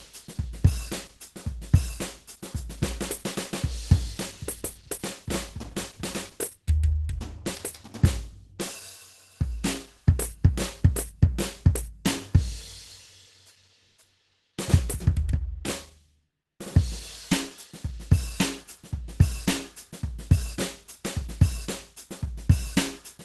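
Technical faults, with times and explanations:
Throughout, Opus compression: the music sounds hoarse, grainy and muffled, with plainly audible damage and nothing above 12.1 kHz. The cause is likely a low-rate Opus encode, which fits a rate around 16 kbps. At that budget the encoder appears to have dropped into its hybrid mode, handling the lower band with its speech coder and patching the upper band coarsely, so tones turn rough and breathy, and the top octave is simply cut away.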